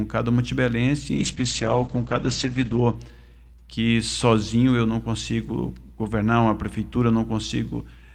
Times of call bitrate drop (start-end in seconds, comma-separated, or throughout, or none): 1.16-3.01